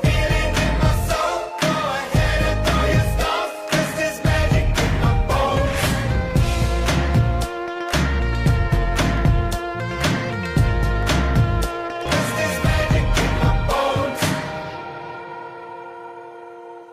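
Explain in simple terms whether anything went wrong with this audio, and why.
Dropped samples, heard as two sharp clicks at 9.18 s and 11.03 s. The likely cause is a tiny sliver of audio, a fraction of a millisecond, going missing, so the sound jumps abruptly to a later point. Nothing audible is lost, only a click remains.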